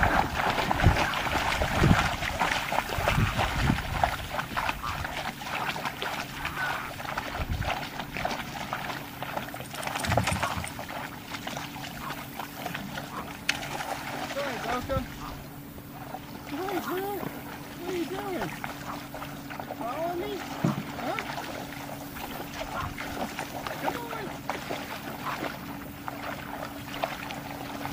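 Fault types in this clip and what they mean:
Dropped buffer (overrun): Four skips, each a tiny forward jump. One or two hundredths of a second vanish each time, likely samples overwritten before being read.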